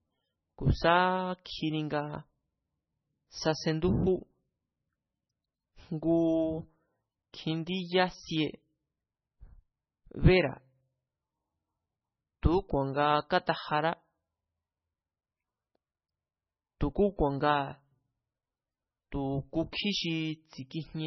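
From the start, the speech sounds watery and swirly, with nothing above 6 kHz and s sounds breaking into metallic chirps, heavy damage that points to a starved MP3 bitrate near 13 kbps. This is likely MP3 compression: short of bits, the encoder cut the treble and zeroed weak frequency lines that flicker between frames.

At 1.45 s a brief hiss, about 10 ms long, runs just ahead of a sharp onset, which then sounds softened. This is pre-echo: the codec spread the quantisation noise meant for the loud attack across its whole block, including the quiet moment before it.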